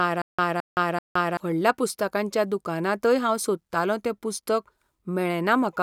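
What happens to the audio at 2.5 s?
Nothing goes wrong at 2.5 s; the speech carries straight through that moment intact, with no dropout, click or other fault.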